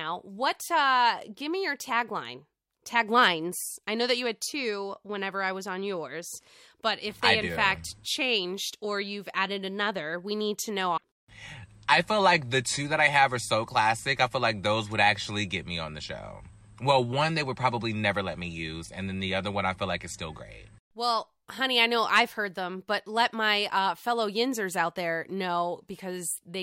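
At 10.93 s the speech breaks up for about 90 ms, ending at 11.02 s. It is damaged data in a compressed stream: a stretch of the encoded bytes arrived wrong, so the decoder could not interpret those frames properly. It misread or dropped them while it lost its place in the stream, then locked back on at the next valid frame boundary, and the speech resumed.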